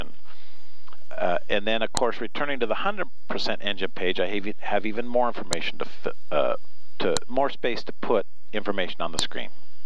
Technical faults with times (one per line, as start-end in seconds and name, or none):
1.97 file header played as audio
5.53 file header played as audio
7.17 file header played as audio
9.19 file header played as audio